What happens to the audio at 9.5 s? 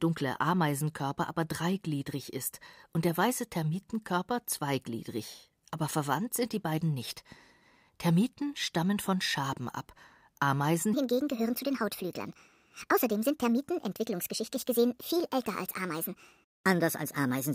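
Nothing goes wrong at 9.5 s; the speech carries on intact through that moment, with no dropout, click or distortion.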